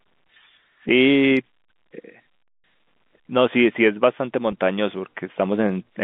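At 4.52 s a brief packet loss with pitch repetition fills a 10 ms gap, which fits a single lost packet. The receiver loops the last pitch period, heard as a faint held buzz. A waveform shows repeated identical cycles, and the spectrogram shows flat harmonics within the 150 Hz to 3.6 kHz G.711 telephone band.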